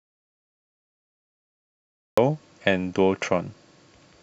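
From the very start until 2.18 s the clip is dead silent, an audio dropout to silence already under way when the recording begins. The input was most likely lost for that stretch, with silence written in its place. What separates it from an ordinary pause or a gated quiet passage is the absence of any room tone or hiss. The speech then enters abruptly mid-flow at 2.18 s rather than starting naturally.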